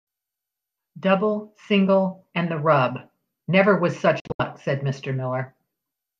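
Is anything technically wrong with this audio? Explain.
Yes. From 4.2 to 4.4 s there is a digital broadcast dropout: the receiver muted on corrupt frames, leaving about 144 ms of silence in short holes over 192 ms, the longest 72 ms, each entered through a 3 ms fade. The gaps fit roughly six lost 24 ms frames.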